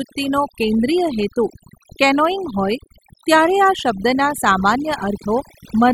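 A speech clip with overdone noise removal throughout: the denoiser is gating bands too hard, leaving a lowered, twinkly background.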